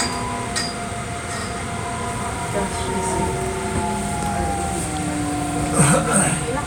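Overlapping chunks at 1.41–1.46 s, 3.46–3.51 s and 5.51–5.55 s: the audio was handled in 2-second chunks, each beginning about 48 ms before the previous one ended. That sliver plays twice at every join, giving a short stutter or click every two seconds.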